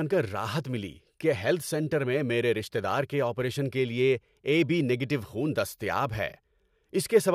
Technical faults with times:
none

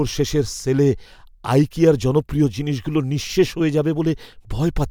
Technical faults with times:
none

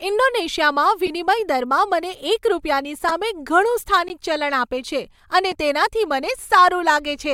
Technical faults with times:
1.06-1.10 corrupt frame decoded
3.08-3.13 corrupt frame decoded
4.08 block of digital silence
5.52 block of digital silence

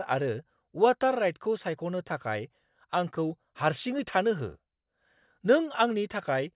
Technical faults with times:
none

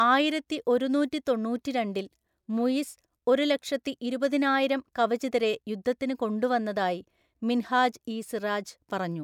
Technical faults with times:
none

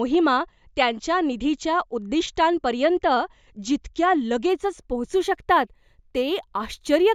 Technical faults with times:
4.49-7.15 imaging from linear upsampling

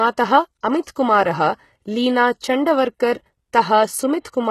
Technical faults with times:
0.00-4.50 HE-AAC compression
0.82-0.87 pre-echo

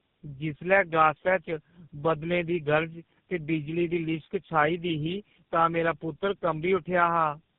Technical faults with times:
0.00-7.58 tandem speech coding

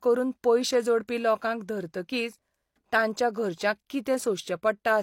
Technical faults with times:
1.08 pre-echo

